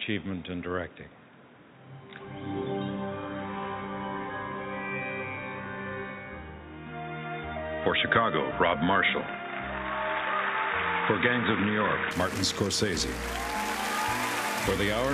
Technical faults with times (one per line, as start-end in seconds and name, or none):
0.00-12.11 input switched to a poorer device